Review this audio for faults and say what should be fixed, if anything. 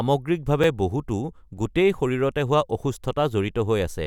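Two blocks of digital silence occur in this speech, at 0.64 s (5 ms) and 1.57 s (about 1.8 ms). The samples drop abruptly to zero and resume without a fade, so each is heard as a tick. On the waveform each appears as a short flat line at zero. On the spectrogram each shows as a thin vertical broadband stripe at its edges. To prevent these, make sure the output buffer is always filled in time and that no processing stage outputs invalid values that get zeroed.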